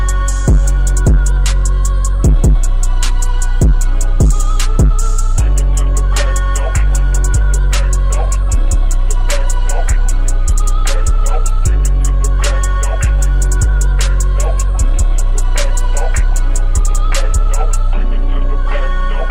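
No technical faults can be heard anywhere in this audio, and the signal holds steady throughout without any break, distortion or interruption.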